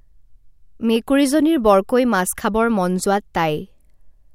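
No technical faults can be heard anywhere in the speech.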